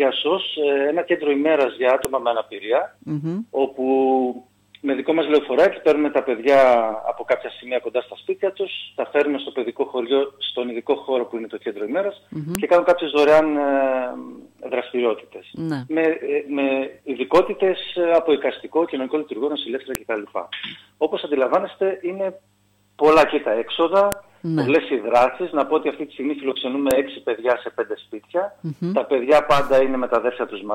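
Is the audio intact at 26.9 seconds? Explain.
No. At 26.91 s a file header is played as audio: a joined WAV piece kept its header, whose bytes decode as samples and produce a sharp, loud click.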